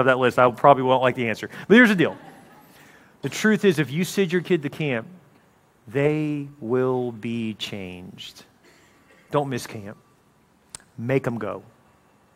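No technical faults can be heard anywhere in the audio; the signal holds steady throughout.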